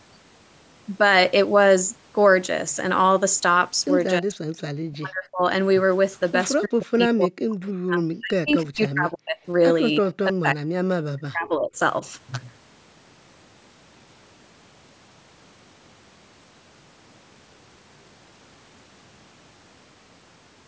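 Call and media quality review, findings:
Speech suppressed in double talk: speech level collapses by about 40 dB at 4.2–4.58 s, 4.84–5.43 s, 6.65–9.48 s, 10.24–10.83 s and 11.05–11.79 s, and by about 20 dB at 10.01–10.06 s. Likely cause is the echo canceller's suppressor mistaking simultaneous far-end talk for echo and attenuating the near-end talker with it. Waveform shows abrupt envelope notches. Spectrogram shows harmonics fading to near-blank columns across the band, which tops out at 8 kHz.

Echo leak: a faint delayed replica of the voice at 6.13–6.3 s, about 40 dB below the speech and lagging it by 332 ms, and at 8.48–8.53 s, about 25 dB below and lagging by 335 ms. Likely residual loudspeaker echo passing the far-end canceller's adaptive filter. Spectrogram shows a weak ghost of the preceding harmonic pattern shifted right by roughly a third of a second. The waveform shows low-level bursts.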